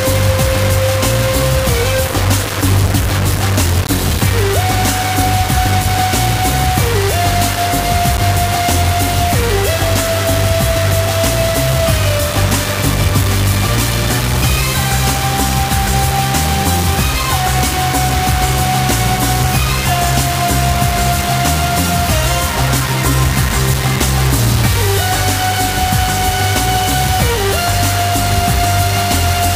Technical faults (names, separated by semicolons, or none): low bit depth without dither